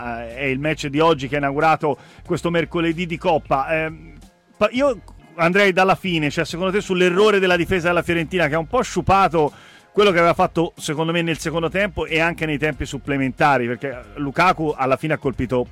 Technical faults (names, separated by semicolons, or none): none